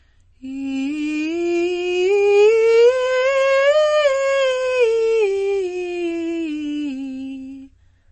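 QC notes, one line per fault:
Throughout, MP3 compression: treble ends abruptly near 8.3 kHz, a flat ceiling on the spectrogram, with watery swirl and smeared attacks, likely from a bitrate near 32 kbps.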